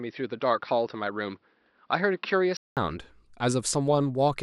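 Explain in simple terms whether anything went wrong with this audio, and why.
From the start until about 2.77 s, the speech sounds dull and boxy, with nothing above about 5.8 kHz, so the crisp edges of the sound are missing. It's a bit quieter, with a faint layer of background noise. Then there's a short gap of about 200 ms, and the sound opens up and clears. That pattern points to an input switched to a poorer device, likely a different microphone or a headset's call mode at the beginning.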